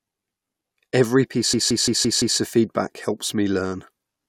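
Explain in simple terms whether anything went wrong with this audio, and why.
From 1.54 to 2.39 s, before "of feedback helps me", one 0.17 s snippet stutters five times. This is a system hang loop: the computer froze while replaying its sound buffer.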